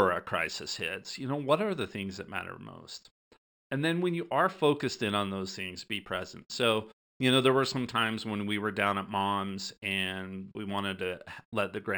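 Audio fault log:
throughout imaging from linear upsampling: top end dulled, faint mirrored image 6 to 12 kHz about 25 dB down, metallic shimmer on sibilants; fits straight-line interpolation from a 12 kHz rate.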